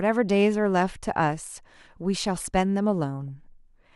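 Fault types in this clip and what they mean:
DAB burbling: a brief patch of noisy blips from 3.28 to 3.46 s, as weak reception lets bit errors corrupt sub-band levels over about sixteen frames.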